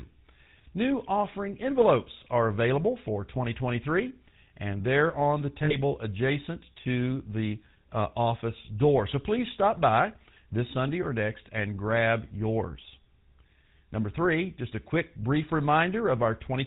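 Throughout, the GSM full-rate codec gives the speech a buzzy, gravelly roughness, which fits the 13 kbps full-rate mode. The vocal tract is modelled and driven by sparse, regularly spaced pulses, so a spectrogram shows nothing above 4 kHz and smeared, coarse harmonics.

From 5.64 to 5.76 s, between "and they're on the" and "adjacent to the uh", lost GSM frames appear, consistent with about three lost frames. The decoder repeats the last good frame, producing a brief metallic ring.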